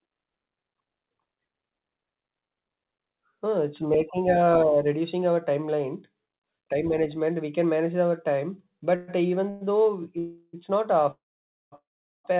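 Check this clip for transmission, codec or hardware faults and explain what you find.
Five call audio freezes occur late in the speech, at 8.96–9.10 s, 9.50–9.63 s, 10.19–10.55 s, 11.11–11.74 s and 11.76–12.26 s. Each stretches the last sound into a fading buzz or hiss. In the final two, it dies to silence for about 0.5 s and 0.4 s. Speech then resumes where it stopped, so nothing is lost. The likely cause is delayed packets draining the jitter buffer. The narrow band, with nothing above 4 kHz, fits a 64 kbps G.711 mu-law call path.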